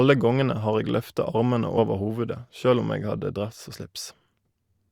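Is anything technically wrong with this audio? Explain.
Yes, compressed frames were skipped three times. Whole coded frames never reach the output, so the speech jumps forward at each point.

At 1.77 s, just before "over hovudet sjølv om", roughly 40 ms of speech goes missing, which fits about two 20 ms frames.

At 3.17 s, between "hovudet sjølv om eg" and "dress og", the skip is around 20 ms, which points to a single frame.

At 4.49 s, about 70 ms vanishes, consistent with roughly three frames.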